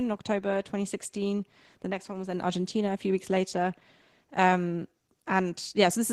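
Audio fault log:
Throughout: Opus voice compression, plainly audible, with speech sounding hoarse and slightly robotic, which fits about 16 kbps hybrid coding; the spectrogram shows coarse, smeared bands above 8 kHz.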